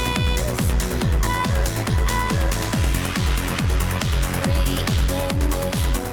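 From start to finish there's overlap-add ripple: the audio was split into windowed frames and stitched back with overlaps that don't sum to a flat gain, so the level dips and swells by about 6 dB roughly a hundred times a second, giving a rough, buzzy, robotic flutter.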